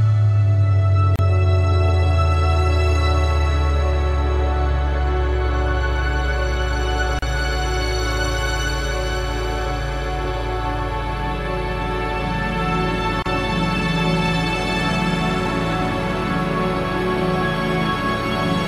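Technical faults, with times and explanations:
1.16–1.19 s, 7.19–7.22 s, 13.22–13.26 s: gaps at joins of encoded pieces. Segments encoded separately, about 6 s apart, were spliced without trimming encoder delay and final-frame padding, so 32 to 34 ms of silence opens mid-sound with smeared edges before the sound resumes where it stopped.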